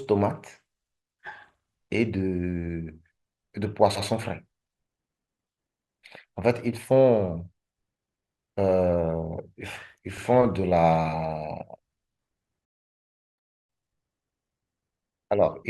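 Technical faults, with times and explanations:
3.95–4.07 s and 10.17–10.25 s, repeated frames: a 120 ms and then an 80 ms stretch of compressed audio replays once, causing a brief stutter that lengthens the sound.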